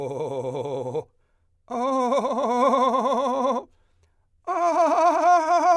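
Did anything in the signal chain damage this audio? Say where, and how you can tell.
No, nothing along the chain seems to have touched this music, and I can't pick out any point where the signal took damage.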